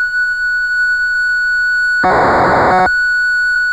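At 3.55 s, near the very end, compressed frames are skipped: a run of several frames never reaches the output, either missing from the stream or rejected by the decoder as corrupt. Roughly 150 ms of audio vanishes and the sound leaps forward. A spectrogram shows an abrupt discontinuity in the spectral content, and the waveform's envelope jumps.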